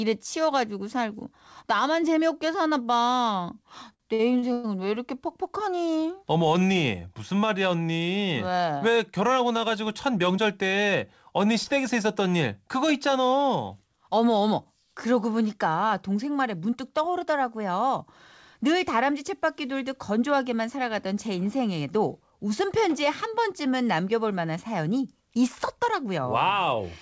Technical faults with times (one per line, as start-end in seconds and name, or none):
3.94-4.66 repeated stalls (stutter)
9.65-10.45 jitter buffer speed-up
11.64-11.68 short concealed packet loss
16.65-17.35 jitter buffer speed-up